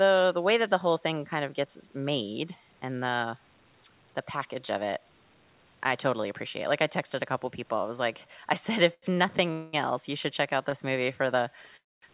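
At 8.94 s (about 0.1 s), 9.14 s and 10.70 s (about 20 ms each), a short stall from a late packet holds the last speech sound briefly with a slight buzz or dip. The speech then resumes with nothing skipped. These stalls are shorter than a freeze.

At 9.52 to 9.75 s and 11.77 to 12.04 s, a call audio freeze stretches the sound into a fading buzz or hiss. In the second freeze it drops to silence for about 240 ms. Packets were likely held up until the jitter buffer ran empty. A freeze lasts a quarter second rather than a moment, and speech continues unskipped.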